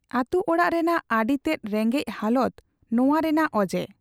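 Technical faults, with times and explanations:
No technical faults can be heard in this speech clip. There is nothing here to time or explain.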